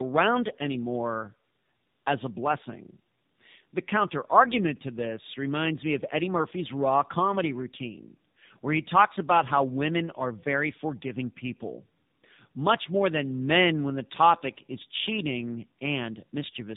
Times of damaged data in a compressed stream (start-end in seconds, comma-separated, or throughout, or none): none